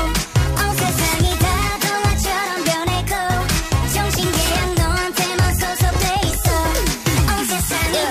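No technical faults are audible anywhere in this audio; nothing to flag.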